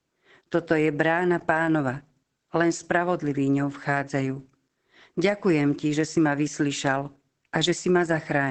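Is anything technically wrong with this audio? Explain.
Yes, there's Opus voice compression running the whole way through this speech. Nothing comes through above about 8.5 kHz, and the coarse linear-prediction coding in SILK leaves the voice muffled, a bit hoarse and faintly robotic, which fits a wideband setting at roughly 12 kbps.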